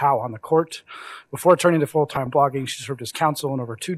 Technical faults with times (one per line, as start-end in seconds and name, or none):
2.14-2.27 DAB burbling